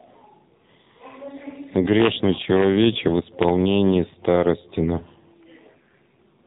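From start to finish the speech sounds boxed-in and buzzy, with a synthetic edge on every syllable and nothing audible above about 3.8 kHz. That is the AMR narrowband mobile codec at work. AMR-NB samples at 8 kHz and rebuilds the voice from a vocal-tract model fed by sparse pulses every 5 ms. The clearly audible damage fits one of its lower modes, around 7.4 kbps.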